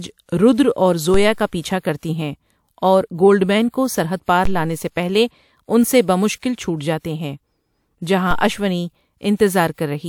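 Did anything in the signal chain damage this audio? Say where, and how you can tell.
Yes. There are DC steps at 1.14, 4.45 and 8.31 s, the first just after "رودر اور". The converter or a switched input jumps the zero line, giving a thump that drains away through a roughly 2 Hz high-pass.

The codec added pre-echo at 1.80, 4.23 and 9.36 s. Hiss runs 39, 49 and 38 ms ahead of attacks, because block-wide quantisation noise fills the quiet before each onset.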